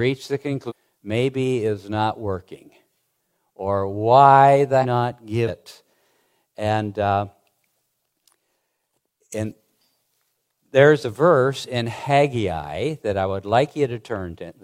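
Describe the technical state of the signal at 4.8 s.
Damaged data in a compressed stream sits at 4.79 to 4.85 s, just after "or why". For about 65 ms, part of the encoded stream is corrupted, so the decoder cannot read those frames correctly. It loses its place in the bitstream and has to hunt for the next valid frame header before it can resume normal output. The result is a short, harsh chirp or blip cutting into the speech.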